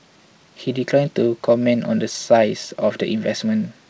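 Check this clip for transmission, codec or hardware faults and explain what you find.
I find no transmission, codec or hardware faults in this speech clip, which came through a call path with nothing above 8 kHz.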